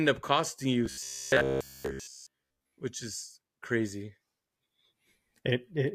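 From 0.86 to 2.81 s, after "up costing you" and before "which is crazy", the speech becomes a robotic sound from repeated short buffers. It is a rigid metallic buzz near 66.8 Hz across most of that stretch. The likely cause is looping of a roughly 15 ms buffer.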